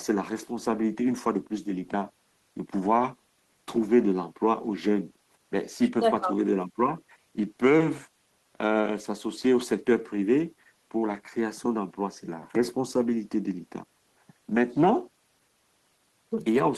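No technical faults can be heard anywhere in the recording, and the signal holds steady throughout.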